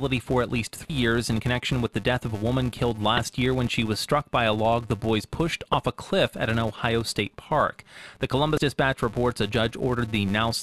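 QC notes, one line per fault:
throughout: filter restarted on every block. A filter in the chain drops its stored state at each block boundary and begins again from silence, so every block opens with a tiny transient. Those transients recur every 5 ms and form a steady 200 Hz buzz under the speech. It swells in louder passages and fades in quieter ones because the size of each restart step follows the signal level.
0.87–0.90, 3.17, 5.73, 8.55–8.58: damaged data in a compressed stream. At each of these points part of the compressed stream is corrupt. The decoder misreads the frame, loses sync and hunts for the next valid header, which leaves a short chirp or blip. The first falls after "for at least" and before "in connection with the". The second falls after "of a woman killed" and before "year when she was". The third falls after "log the boys pushed" and before "a cliff at an".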